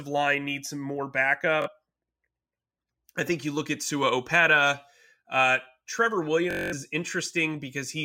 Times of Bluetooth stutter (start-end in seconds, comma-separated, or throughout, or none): 1.62-1.68, 6.51-6.74